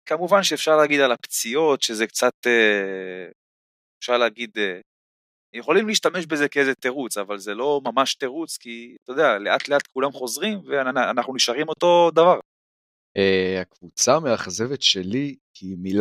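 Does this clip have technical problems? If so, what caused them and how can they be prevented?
No, there's nothing technically wrong to hear here, so there's no cause to track down and nothing that needs preventing.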